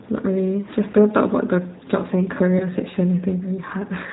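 Throughout, the speech sounds slightly rough and synthetic, with nothing above 4 kHz and a plainly audible coarseness. This is the G.729 codec, rebuilding the sound from a vocal tract filter, pitch predictor and sparse pulses, which fits a rate of 8 kbit/s.

At 0.92 to 0.95 s and again at 2.58 to 2.67 s, the sound smears into a brief buzzy or noisy, fading stretch. This is VoIP packet loss concealed by the speech codec: each gap fits a single lost 20 ms packet, with the decoder extrapolating from its last pitch and filter.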